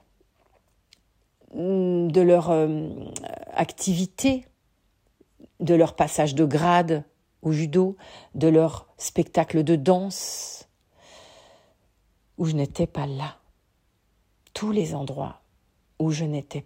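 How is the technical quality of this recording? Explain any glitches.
No glitches turn up here: the speech comes through steady and uninterrupted, with nothing in the way of dropouts or odd artefacts to explain.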